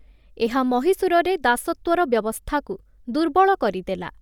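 Speech runs the whole length of the clip with plainly audible codec damage: a grainy, breathy edge on the upper part of the sound. The likely cause is Bluetooth LC3 compression, which fits a 10 ms frame at around 48 kbps. What sets it apart from simple band-limiting is that the bandwidth itself stays wide, with content reaching 20.2 kHz. The roughness comes from coarse quantization inside each transform frame, with parts of the upper spectrum zeroed and filled with noise.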